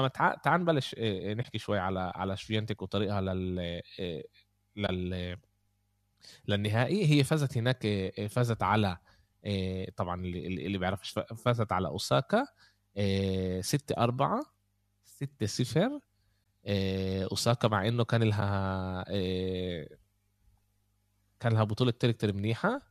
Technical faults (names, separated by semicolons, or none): AAC frame loss with muting